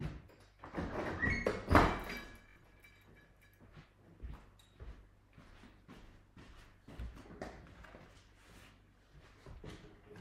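At 2.50 to 2.56 s, a repeated buffer occurs: new audio arrived late, so the device replayed its last block three more times. Each block lasts 21.33 ms, which fits a 1024-sample buffer, and the hard joins between copies give a brief buzzing stutter, with roughly 70 ms of the sound lost. At 8.02 to 8.04 s, the same fault recurs with one extra play, heard as a single short click and a skip of about 20 ms.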